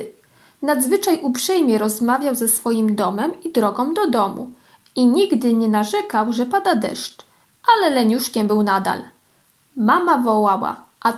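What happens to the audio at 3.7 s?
At 3.7 s the audio sits inside a run of repeated timing corrections lasting from 0.16 to 10.92 s, heard as slight hiccups and an unsteady tempo running at about 98% speed. Unlike random dropouts, every small edit goes the same way, stretching the sound and adding about a fifth of a second overall.

The cause is clock drift between sender and receiver. The sender's clock runs about 2% slow, so the receiver keeps repeating short pieces to fill its buffer. The hiccups therefore recur at uneven intervals throughout the clip rather than clustering around one network event.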